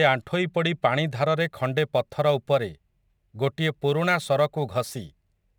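From 1.40 s to the end of the speech, sample clock jitter sets in. The converter's timing wanders by a few microseconds, so each sample lands slightly off its proper instant, and the error grows with how steeply the waveform is changing. It shows up as a roughness or hiss that rides on the louder, brighter syllables and sits roughly 30 dB below them. On a spectrogram this shows as a faint broadband haze that tracks voiced energy. In the waveform the gaps stay clean.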